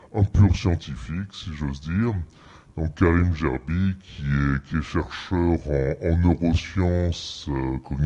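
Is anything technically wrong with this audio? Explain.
Yes. Wrong sample rate, throughout: the audio runs at about two-thirds speed, which fits 48 kHz material played back at 32 kHz without conversion. Speed and pitch drop together by that ratio, so everything sounds slowed, dragged and about 7 semitones lower.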